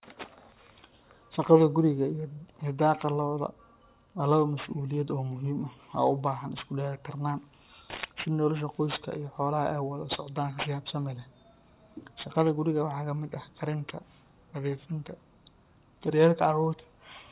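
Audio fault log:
Throughout, aliasing: gritty, metallic sibilants from content folded back below 4 kHz, roughly 20 dB down; unlike plain band-limiting, it adds unrelated pitches rather than dulling.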